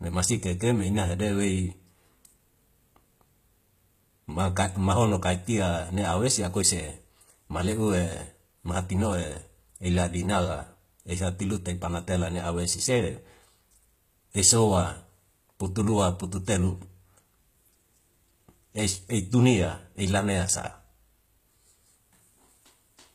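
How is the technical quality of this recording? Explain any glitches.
The technical quality is compromised by plainly audible codec damage from start to finish. The speech was likely passed through HE-AAC compression, and the degradation points to a low bitrate around 20 kbps. At that rate the encoder keeps only the lower spectrum and fakes the treble by copying lower bands upward under a coarse envelope. The top stays bright but false, with nothing above 14.9 kHz, and its harmonics no longer line up, so s sounds come out gritty, metallic or lispy.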